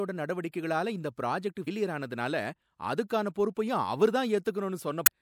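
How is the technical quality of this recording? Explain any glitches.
The speech has two short glitches, both from damaged data in a compressed stream. The first runs from 1.64 to 1.68 s, right after "இந்த புராஜெக்ட்". The second runs from 5.03 to 5.09 s, near the end. Each is a brief chirp or blip. Some bytes in the coded stream were corrupted. The decoder misread those frames and lost sync. It then hunted for the next valid frame header, and the audio broke up briefly.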